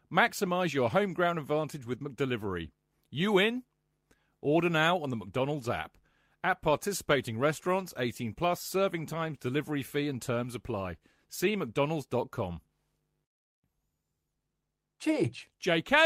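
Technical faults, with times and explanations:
No technical faults are audible anywhere in the speech recording.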